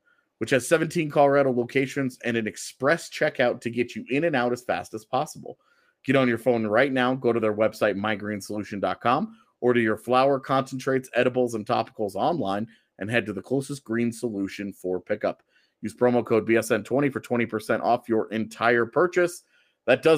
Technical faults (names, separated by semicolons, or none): none